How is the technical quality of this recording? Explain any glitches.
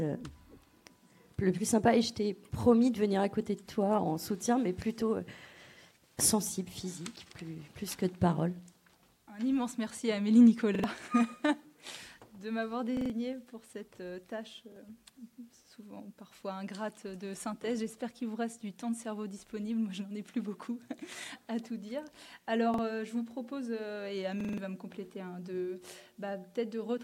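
The recording has repeated buffer glitches, five of them: at 10.75 s (two extra plays), 12.97 s (three), 14.72 s (one), 22.74 s (one) and 24.41 s (four). Each time new audio arrived late, so the device replayed its last chunk, about 43 ms long, which fits a 2048-sample buffer. The same slice sounds again with a hard join at every repeat, heard as a brief stutter, and up to about 150 ms of audio goes missing.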